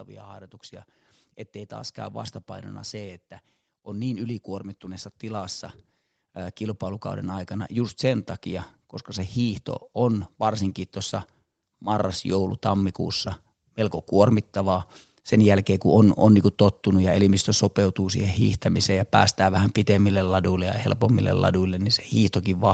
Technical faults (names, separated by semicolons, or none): automatic gain rising